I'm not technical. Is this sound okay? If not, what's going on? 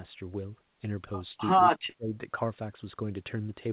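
No. From 1.71 to 2.14 s the speech nearly vanishes, likely speech suppressed in double talk: the echo canceller muted it while both sides talked at once.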